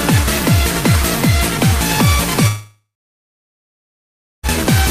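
From 2.47 s to 4.46 s the sound breaks off for nearly two seconds, a long network dropout that likely comes from lost packets. The last sound is stretched into a fading buzz, then about 1.6 s of silence follows before the audio resumes without the missing 1.96 s. A short concealed gap would last only tenths of a second.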